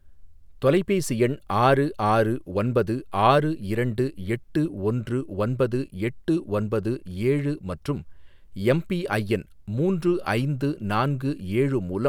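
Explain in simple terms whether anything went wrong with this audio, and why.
Nothing went wrong technically with this speech recording: the signal stays steady and intact throughout, with no dropouts, glitches or sudden changes at any point.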